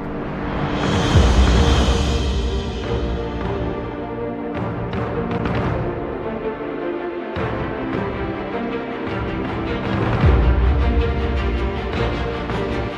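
The audio has a single brief disruption from 5.37 to 5.40 s, a glitch of about 28 ms where the signal momentarily breaks up. Its length matches roughly one MP3 frame of about 26 ms, and the likely cause is a broken MP3 bit reservoir. After frames were lost, the following frame reached back for borrowed bits and decoded data that belonged to a different frame, corrupting the output until the stream resynchronised.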